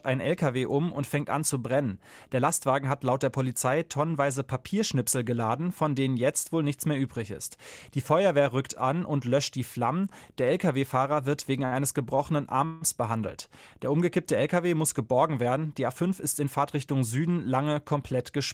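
A short stall from a late packet occurs at 11.65 to 11.74 s, just after "wird wegen". A packet arrived late, the jitter buffer ran dry, and the last sound is held for 62 ms before continuing with nothing lost.

A call audio freeze follows at 12.65 to 12.83 s. The speech halts and its last sound is drawn out as a fading buzz for 161 ms, then resumes where it stopped. The likely cause is packets held up in transit, which emptied the jitter buffer.

A jitter buffer speed-up runs from 15.46 to 16.96 s, after "muss geborgen". To shed excess delay, the receiver cut roughly 100 ms of short pitch-period slices, so the speech plays about 7% faster at unchanged pitch and sounds hurried.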